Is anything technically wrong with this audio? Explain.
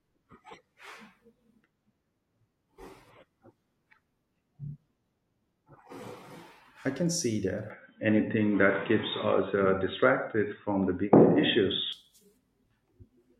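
Yes. From 7.70 s to 11.93 s the speech abruptly narrows, with nothing above 3.8 kHz, then recovers at the end of that stretch. This is most likely an input switched to a poorer device, where recording moves mid-stream to a lower-grade microphone or a headset call profile with a restricted band. The speech turns dull and boxy, the level shifts by about 5 dB, and a faint new noise floor sits far below the speech. There is no gap at either switch.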